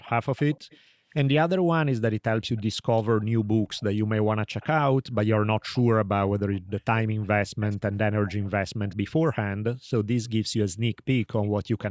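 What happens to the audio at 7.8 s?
At 7.8 s the audio is inside an echo leak running from 6.53 to 8.96 s. A faint copy of the speech trails it by 193 ms, about 25 dB down. This is likely the far end's loudspeaker sound getting past its echo canceller.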